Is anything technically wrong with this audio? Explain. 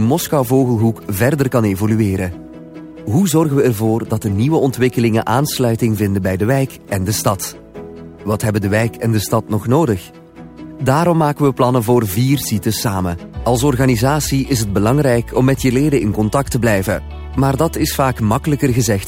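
Yes. Sample clock jitter runs throughout: the converter's clock wanders by around 5 microseconds rms, so each sample lands slightly off time. Steep, loud or high-frequency passages produce the largest errors, leaving a hiss-like roughness roughly 25 dB below the signal that tracks the level and disappears in quiet gaps.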